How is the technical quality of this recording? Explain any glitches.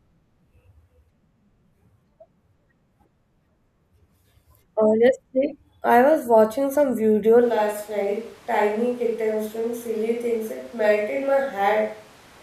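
The recording has one glitch, a change of pickup partway through. From 7.44 s to the end, the close microphone likely drops out, causing a switch to a distant microphone: speech turns abruptly roomy, hollow and thinner, about 5 dB quieter, with room noise roughly 25 dB below it.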